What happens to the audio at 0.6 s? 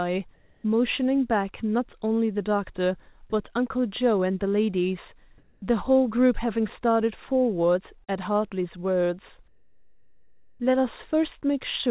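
Comfort noise in place of the background runs from 0.34 to 0.64 s. The pause most likely went untransmitted, so the receiver filled it with steady, featureless synthetic noise about 4 dB off the real background level.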